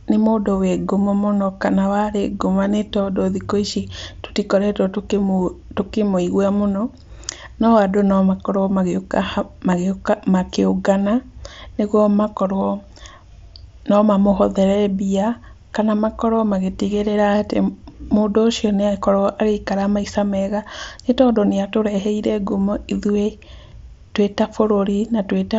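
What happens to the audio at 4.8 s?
Nothing goes wrong at 4.8 s: the speech continues intact through that moment, carried as usual by the Bluetooth mSBC headset link.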